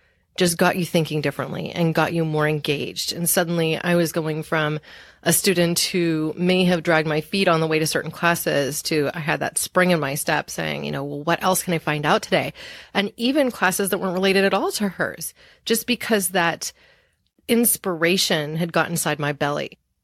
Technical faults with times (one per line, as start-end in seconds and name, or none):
none